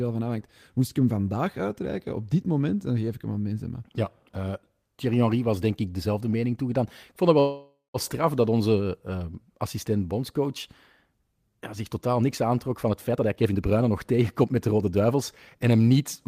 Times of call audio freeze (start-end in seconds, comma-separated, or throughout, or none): 7.39-7.97